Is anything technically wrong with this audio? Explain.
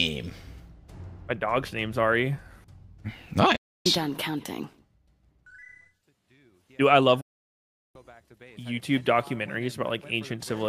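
Yes. Digital broadcast dropout at 3.56–3.86 s and 7.21–7.96 s: the receiver lost good frames and muted, fading out within 8 ms, leaving silent gaps of about 0.3 s and 0.75 s.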